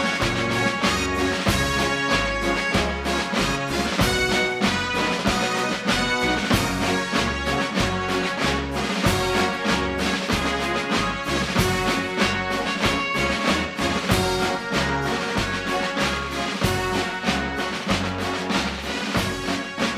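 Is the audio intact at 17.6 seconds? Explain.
Yes, the audio is intact at 17.6 seconds, with no dropout, click, distortion or other fault at that point.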